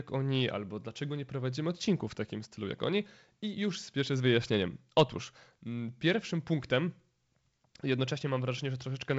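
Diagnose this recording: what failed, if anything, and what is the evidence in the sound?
Nothing has failed: the speech carries the normal signature of G.722 wideband telephone coding, with content stopping at about 7.7 kHz and a light hiss in the upper band, consistent with its 56 kbit/s mode.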